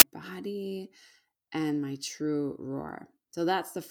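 Right at the start, at 0 s, there's a very short burst of very loud white noise with hard edges, lasting just under 20 ms. That's file tags played as audio: a block of compressed data, most plausibly an embedded cover picture, got read as if it were samples. Because compressed bytes look essentially random, they come out as a harsh, dense blast of static rather than a rasp or silence.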